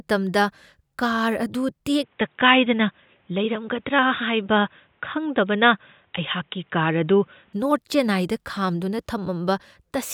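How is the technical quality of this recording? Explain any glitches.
The recording has one clear fault. From 2.03 s to 7.53 s, the speech suddenly turns dull and boxy, then clears up again. This is most likely an input switched to a poorer device mid-recording. The replacement input passes nothing above about 3.8 kHz, so the upper range of the voice disappears. It also brings its own tone, a modest level change and a faint new noise floor. There is no silence at either switch.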